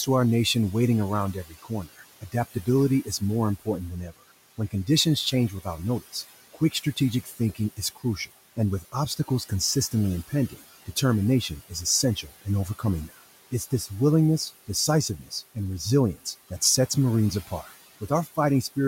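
Noise suppressor artifacts run through the whole recording. The suppressor estimates which frequency bands hold steady noise and attenuates them frame by frame, here by about 15 dB. The room noise, which sits about 18 dB below the speech, therefore drops away in the gaps between words and comes back up underneath them. The background seems to pump in step with the talking rather than holding a constant level.

Between 1.33 and 13.88 s, speech cut by the noise suppressor occurs repeatedly. Parts of the speech were classified as noise and pulled down along with the background, by about 19 dB at the deepest point, adding up to roughly two seconds of affected speech. Soft consonants, word endings or quieter phrases sound swallowed or faint. The same fault recurs between 17.47 and 18.77 s, shallower at about 12 dB at its deepest and much briefer, totalling only around 150 ms.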